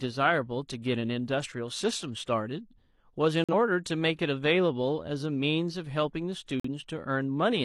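At 3.44 to 3.54 s and 6.60 to 6.68 s, the speech drops into abrupt silence of roughly 90 ms, each hole fitting a single corrupt frame muted after the decoder rejected it. The waveform shows a near-flat line, and the spectrogram a hard-edged blank column, with timing preserved.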